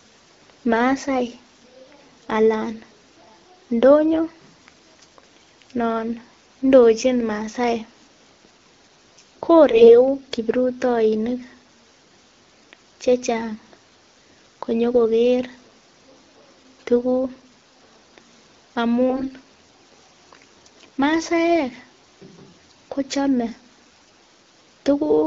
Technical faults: AMR bit errors

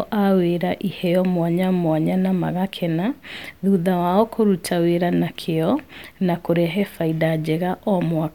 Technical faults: none

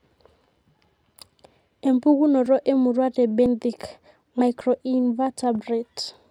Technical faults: dropped buffer (overrun)

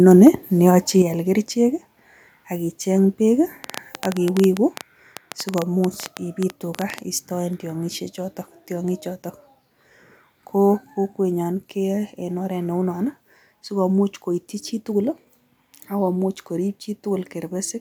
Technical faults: microphone overload; microphone volume stepped down; train of clicks

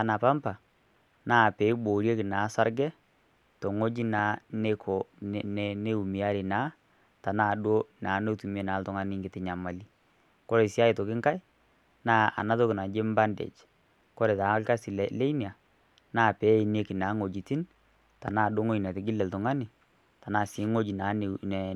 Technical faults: none

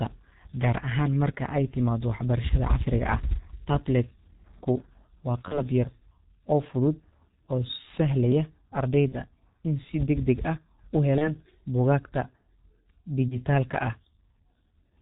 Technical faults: G.723.1 codec; VoIP packet loss concealed by the speech codec

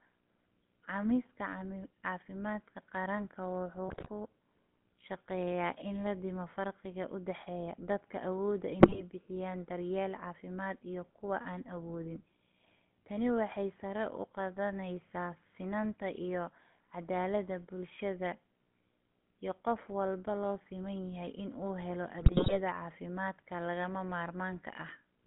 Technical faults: GSM full-rate codec; GSM bit errors

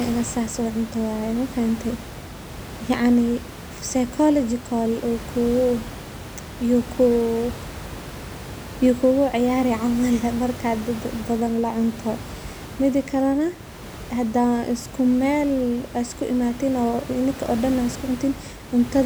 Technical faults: none

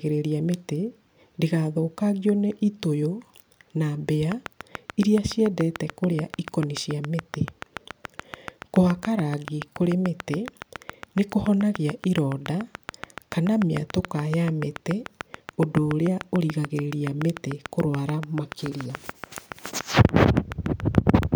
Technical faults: train of clicks

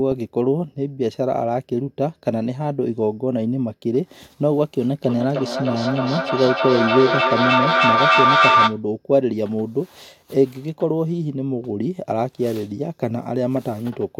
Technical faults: feedback howl

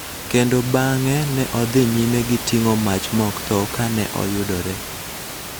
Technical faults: none

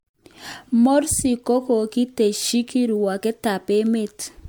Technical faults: generation loss

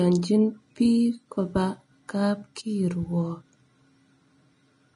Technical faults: low-bitrate audio saved at a high bitrate

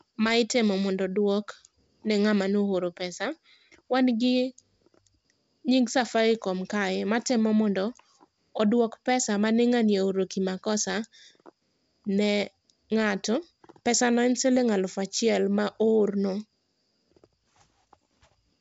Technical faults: none

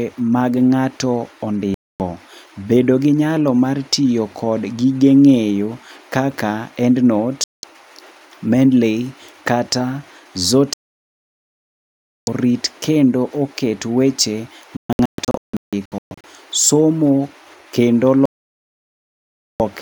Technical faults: digital broadcast dropout

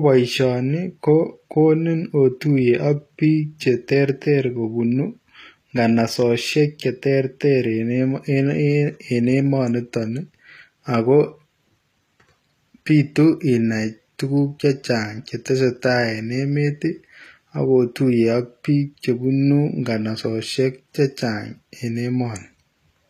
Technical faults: HE-AAC compression

